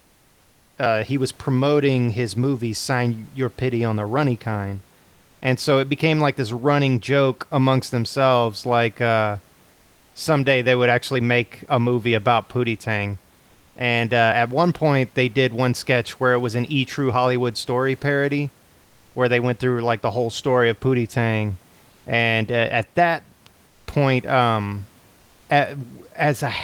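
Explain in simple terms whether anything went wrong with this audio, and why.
Something went wrong in three short pauses. The sending side likely stopped transmitting whenever it heard no speech, and the receiving side filled each gap with comfort noise in place of the background. Instead of the real room noise, you hear a flat, featureless hiss, a little quieter, from 9.71 to 10.15 s (after "amongst themselves like uh"), from 23.67 to 23.87 s (after "uh at that"), and from 25.19 to 25.49 s (after "point um").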